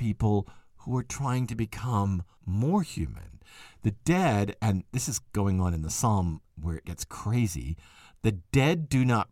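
A speech recording with a stretch of sample clock jitter from 1.65 to 4.74 s. In that span a faint hiss and roughness rides on the voice. It swells on louder and brighter sounds and drops away in the pauses. The converter's clock is wandering, by roughly a microsecond, so each sample lands a little early or late. Steep parts of the waveform turn that timing error into noise, sitting around 50 dB below the signal.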